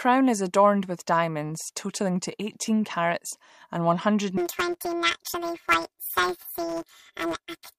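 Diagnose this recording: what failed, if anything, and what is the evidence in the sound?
The sample-format conversion stage failed: from 4.37 s to the end at 7.78 s, planar audio is read as interleaved. Each block holding all left samples and then all right ones is taken as alternating pairs, so every block plays twice at double speed, left then right. The blocks here are short, about 5.8 ms, which fits 256-sample blocks, so the speech has no octave jump. Instead it turns into a robotic buzz at about 172 Hz, the block rate.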